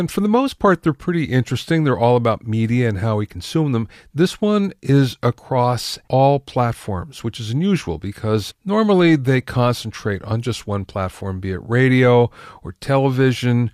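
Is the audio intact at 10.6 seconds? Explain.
Yes, at 10.6 seconds the speech plays through intact, with no dropout, click or other fault at that moment.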